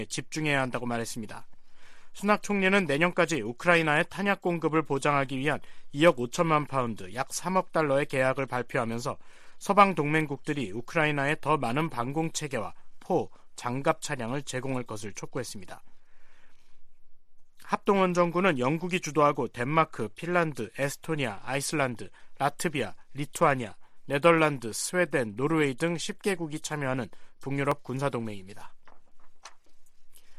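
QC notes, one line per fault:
27.72 s and 28.56 s, dropped samples: two isolated sharp clicks, less than a second apart, each a thin vertical line across the whole spectrum. Each is likely caused by a fraction of a millisecond of samples going missing, so the waveform jumps straight to a later value. Unlike a dropout, no stretch of sound disappears and there is no audible gap. Unlike a clipping crackle, each click is single and stands apart from the level around it.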